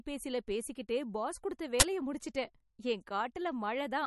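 Throughout the speech, nothing sounds above 11.6 kHz, and weak detail flickers in and out, giving a watery, swirly quality with chirpy sibilants and smeared attacks. This is likely MP3 compression at a low bitrate, roughly 40 kbps. Unlike a simple low-pass filter, the damage shifts from frame to frame.

From 1.80 to 1.82 s, between "பேசிக்கிட்டே பாஸ் கொடுத்த" and "முடிச்சுட்டேன் என்", a 20 ms burst of digital noise cuts in. This is an uninitialised buffer: a block was played before any audio was written to it, so leftover memory was heard as sound. A dropout or click would be silent or brief, but this is a harsh, noisy blast lasting the whole block.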